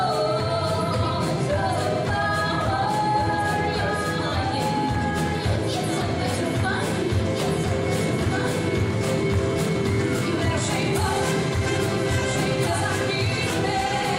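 A doubled audio track runs through the whole clip: every event is heard a second time, roughly a second and a half after the first, as a full-band copy around 5 dB quieter than the original. The repeat carries no decay tail or room colouring, so it reads as a separate, flat duplicate rather than an echo. The likely cause is the same signal reaching the mix twice, once directly and once through a slower capture path.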